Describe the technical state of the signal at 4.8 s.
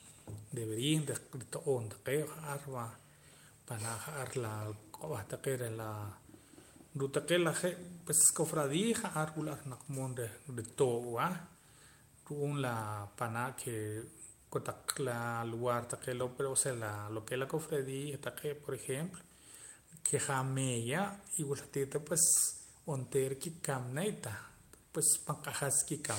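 At 4.8 s the signal is intact, with no dropout, distortion or other technical fault to be heard at that point in the speech.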